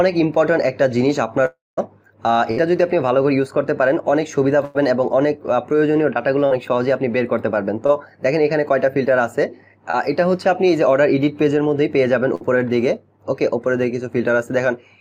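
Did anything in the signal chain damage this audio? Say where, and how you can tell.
Yes. From 1.45 to 1.79 s the sound fades into a dying buzz or hiss, then about 0.19 s of near-silence, likely a long network dropout. The spectrogram shows energy thinning into an empty band.

A burst of packet loss hits at 2.51 s, 4.65 s and 12.35 s, dropping 60 to 100 ms each time. The waveform shows a tapering held buzz or fading hiss, then a jump forward.

Short concealed packet loss of 20 to 40 ms at 6.46 s, 7.87 s and 9.91 s leaves brief smears. The spectrogram shows small blurred patches where the decoder extrapolated the missing audio.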